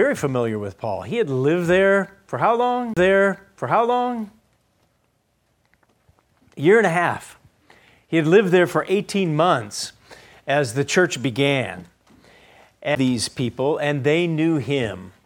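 The laser lost its place on the disc and landed on a different turn of the spiral, a CD skip, first from 2.94 to 2.97 s and again at 12.95 s. Each time the player mutes briefly, around 30 ms the first time and about 10 ms the second, and then resumes from another point. The result is a small tick followed by an abrupt discontinuity, as the audio picks up somewhere other than where it broke off.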